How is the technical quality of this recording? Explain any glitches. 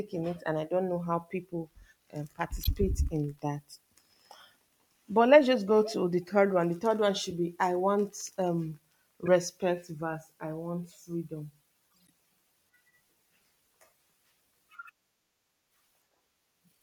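Four brief glitches interrupt the speech, each a corrupt frame decoded. They fall at 2.63 to 2.67 s, 7.30 to 7.32 s, 9.26 to 9.28 s, and 11.92 to 12.10 s. Damaged bits reached the decoder, which played the frames anyway. Misread gains and codes put energy at wrong frequencies. The first three are short blips, one to a few frames, peaking near -20 to -25 dBFS. The last spans several frames but stays faint, around -50 dBFS.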